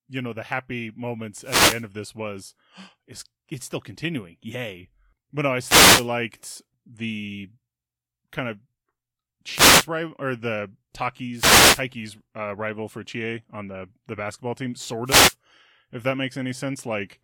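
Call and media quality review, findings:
Brief static swishes over the speech at 1.39–1.87, 5.61–6.09, 9.51–9.87, 11.35–11.83 and 15.05–15.35 s, each 0.3–0.5 s. Wireless microphone noise hit: FM radio link fading as reflections cancel, letting receiver noise surge over the voice.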